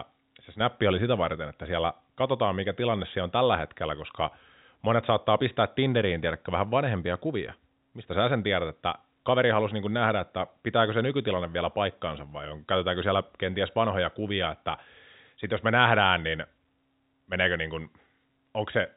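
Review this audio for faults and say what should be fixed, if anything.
No faults; nothing needs fixing.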